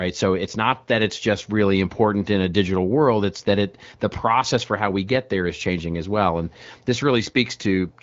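No technical faults can be heard in the speech, which has been carried over the AMR wideband (HD Voice) codec at 12.65 kbit/s, a rate at which that codec leaves only light coding damage.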